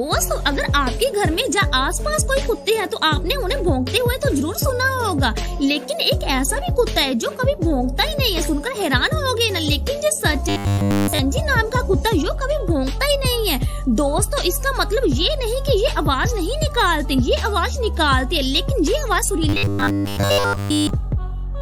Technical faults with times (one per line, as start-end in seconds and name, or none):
10.49-11.19 robotic sound from repeated short buffers
19.49-20.90 robotic sound from repeated short buffers